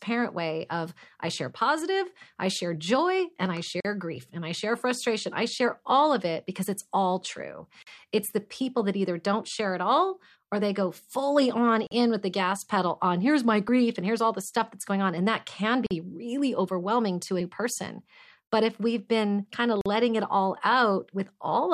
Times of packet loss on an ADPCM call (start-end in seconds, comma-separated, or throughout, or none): none